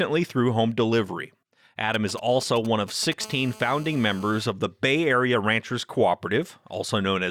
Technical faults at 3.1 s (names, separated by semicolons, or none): GSM signalling bursts